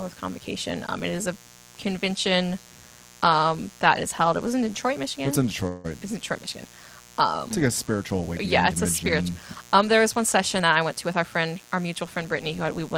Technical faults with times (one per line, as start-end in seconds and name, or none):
0.00-12.97 mains buzz
5.67-5.86 call audio freeze
10.60-12.96 jitter buffer speed-up